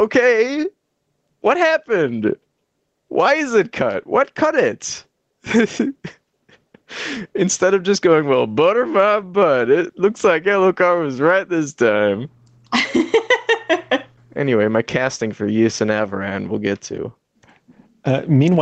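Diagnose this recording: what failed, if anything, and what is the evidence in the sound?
The gain pumps throughout, a swing of around 15 dB, pulling loud and soft parts closer in level and leaving the speech squashed. This is gain pumping at the capture stage, likely input gain set far too high with a fast limiter clamping it down.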